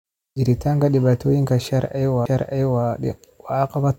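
At 2.26 s there is a CD skip: the laser lost its track and landed on a different turn of the disc's spiral, so the player muted for a few milliseconds and resumed the speech from another point. It is heard as a small tick followed by an abrupt jump in the flow of speech. On the waveform it appears as a tiny flat gap with mismatched edges, and on a spectrogram as a thin vertical broadband line where the harmonic pattern breaks off.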